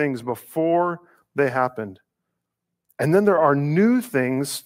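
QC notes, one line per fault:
Nothing to flag here; the speech comes through with no technical faults to note.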